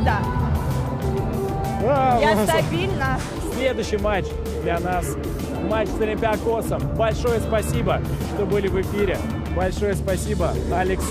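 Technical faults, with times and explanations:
No technical faults detected.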